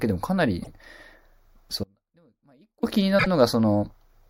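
It's a short speech clip with two kinds of trouble. There are repeated frames at 0.61 to 0.68 s, where a 48 ms chunk plays once more, which fits two 24 ms compressed frames being sent twice. At 3.18 to 3.27 s a single 24 ms block plays two extra times, giving a quick stutter. Between those, from 1.84 to 2.83 s, there's an audio dropout to a faint residue. The sound cuts abruptly for about a second, leaving only faint sound roughly 35 dB down. That's likely the signal being lost upstream while the rest of the path stayed live.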